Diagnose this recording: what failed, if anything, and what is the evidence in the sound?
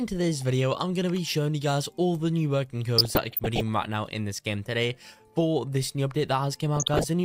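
The codec stage failed: there's DAB burbling from 2.98 to 3.61 s and again from 6.76 to 7.04 s, the second burst rougher. Weak reception let bit errors slip into the MP2 data, so corrupted scale factors throw single sub-bands around, giving those bubbly blips.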